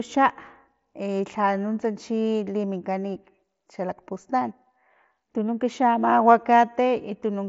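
Nothing stood out on listening to this speech clip.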